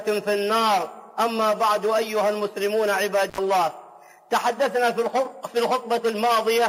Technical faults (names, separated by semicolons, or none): intermittent contact